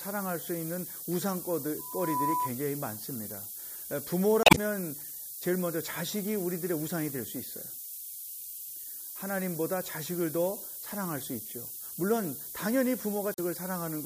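A steady, thin hiss sits under the speech for the whole clip, rising sharply toward the top of the band and nearly as loud as the speech itself. This is low bit depth with noise shaping. The hiss level fits a signal kept to about 5 bits, with the rounding error pushed up into the highest frequencies.

From 1.79 to 2.51 s a pure tone at 994 Hz swells over roughly 0.4 s into a squeal a little louder than the speech. This is loudspeaker feedback squeal: the microphone picked up its own loudspeaker, and the loop gain at that one frequency exceeded one.

At 4.43 to 4.58 s a short disruption interrupts the speech, and about 2.4 ms of extra time is added to the audio. A briefer disruption follows at 13.34 to 13.39 s. Both are damaged data in a compressed stream: corrupted frames made the decoder lose sync and search for the next frame header.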